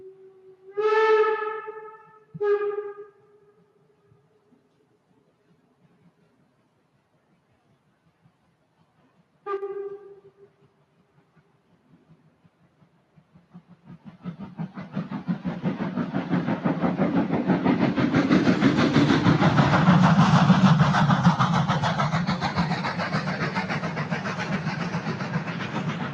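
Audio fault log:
throughout: noise suppressor applied to music or sounds. A suppressor tuned for speech stays active across the whole clip. It treats steady tones, ambience and reverb as noise and pulls them down, by up to roughly 10 dB. Onsets pass largely intact, while sustained parts and tails sink. The level therefore rises and falls with the material rather than with the mix. The result is a pumping, fluttering, thinned-out sound.
0.00–0.78 s, 1.96–2.35 s, 3.00–5.29 s, 10.26–14.25 s, 21.70–26.13 s: sound cut by the noise suppressor. In these stretches the suppressor clamps down harder than elsewhere. The deepest drops reach about 11 dB in the first and last spans and about 10 dB in the others. Only part of each span is hit: up to about a second in the early ones, a couple of seconds around 10–14 s, several seconds at the end. Held and decaying sound fades early, while sharp attacks stay audible.
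9.57–9.62 s: one channel drops out. For about 50 ms the level falls abruptly by about 6 dB, then snaps back. The change is a clean step with no fade. A drop of exactly this size fits material shared by both channels losing half its sum. The likely cause is one stereo channel vanishing briefly before the mono fold-down.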